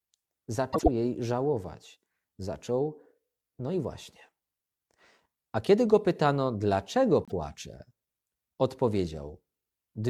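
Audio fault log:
0.73–0.88 s, frames out of order: a brief garbled flutter, just before "jej żałować". Two adjacent blocks of about 52 ms each, consistent with two frames apiece, were decoded in swapped order, so the stretch plays second half first, with discontinuities at the three joins. Nothing is lost.
7.23–7.32 s, frames out of order: a shorter stumble just after "kiedy go pytano dlaczego". Here the swapped blocks are about 26 ms each, which fits single frames, giving a quicker flutter.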